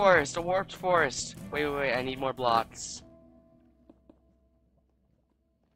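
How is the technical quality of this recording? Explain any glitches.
The recording has one fault, an overlap-add ripple that runs through the whole clip. The audio was split into windowed frames and rejoined with an overlap whose windows do not add up to a constant gain, so the level dips and recovers once per frame, by about 6 dB, at a rate of around 400 Hz. That regular pulsing sits on top of the sound as a metallic buzz, with extra tones around each note.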